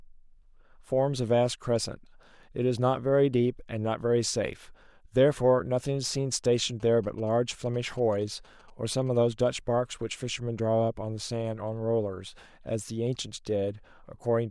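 From 6.80 to 9.17 s, GSM signalling bursts intrude: a nearby 2G phone's radio pulses are rectified by the audio circuit. Beneath the speech, roughly 30 dB down, comes a galloping dit-dit-dit of short buzzes at about 217 Hz.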